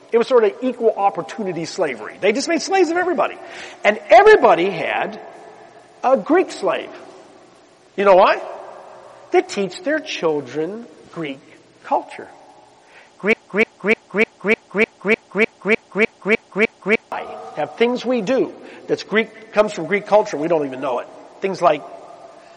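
A broken-record loop runs from 13.33 s to 17.12 s. A fragment of about 0.3 s, 302 ms long, repeats exactly and back to back, thirteen times over, producing a rigid, machine-like stutter with identical attack and decay on every pass. The likely cause is a stalled player, encoder or stream that kept resending the last fragment it held, so whatever should have sounded during those nearly four seconds is missing.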